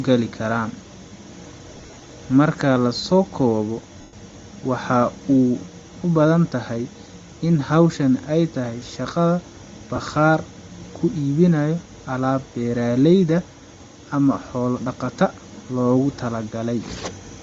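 Right from the start the speech has a breathy, grainy sheen on top, with the upper band thinned out and partly replaced by a hiss-like fill. That's most likely Bluetooth LC3 compression working at a low rate, something around 32 kbps on 10 ms frames. The codec drops much of the high spectrum and patches it with noise, and here the damage is plainly audible.

Around 1.76 to 2.02 s there are lost LE Audio frames. About 140 ms of audio goes missing, scattered across 260 ms, with the longest gap at roughly 40 ms. The decoder fills each hole by repeating the last spectrum with scrambled phase, so the speech turns briefly into a gritty, noisy smear. Another drop at 4.01 to 4.13 s loses 120 ms in one run, long enough that the concealment noise starts fading toward quiet. A last short one at 9.96 to 9.98 s is just a quick 20 ms blip.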